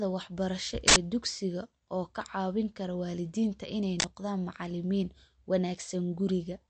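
From start to finish the speech has a hard treble ceiling, with nothing above 8.3 kHz, plus a watery, swirling texture and smeared consonant attacks. The cause is likely MP3 compression at a low rate, consistent with roughly 48 kbps. Short of bits, the encoder discards the upper band and drops weak frequency lines, which flicker in and out between frames. The damage is plainly audible throughout.

At 0.88 s, just before "dugsiga oo ka caawin", an uninitialised buffer produces an 80 ms burst of loud digital noise. A block of memory was sent to the output before any audio had been written into it, so stale contents played as samples. At 4.0 s the same fault recurs as a 40 ms burst, between "caawin kara waalidiinta inay" and "noqdaan macalimiin".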